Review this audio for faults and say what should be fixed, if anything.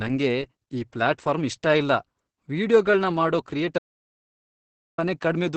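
The whole clip carries heavy Opus voice compression. Nothing comes through above 8.6 kHz, and the speech sounds muffled, hoarse and a bit robotic. That's the SILK coder squeezing its excitation hard, which fits a wideband stream at around 10 kbps. To prevent it, encode at a higher bitrate or keep a lossless master.

There's also an audio dropout to silence. Right after "ವೀಡಿಯೊಗಳ್ನ ಮಾಡೋ" the sound cuts out at 3.78 s and returns at 4.98 s, about 1.2 s of silence with no room tone. The likely cause is input that was lost while recording continued. Check cables, links and mute states before recording to prevent it.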